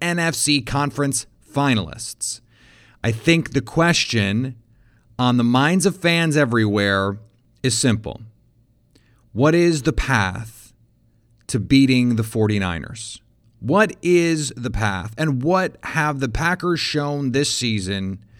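No technical faults can be heard anywhere in this recording.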